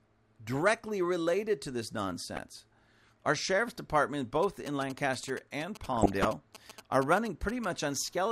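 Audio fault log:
2.36–2.38 s and 5.93–6.28 s, DAB burbling: uncorrected bit errors in weak reception corrupt MP2 sub-band samples and scale factors, giving short blips of noise in single sub-bands after "directly related to this" and later.
4.43–7.65 s, GSM signalling bursts: after "sheriff's department", a nearby 2G phone's rectified signalling bursts give a galloping dit-dit-dit of 217 Hz buzzes, about 15 dB below the speech.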